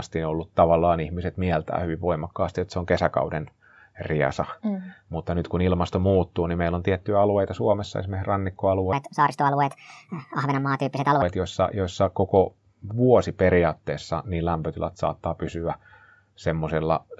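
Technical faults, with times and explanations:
8.93–11.22 s, wrong sample rate: this stretch runs 1.5 times fast and about 7 semitones high, as if 16 kHz audio were played back at 24 kHz with no conversion.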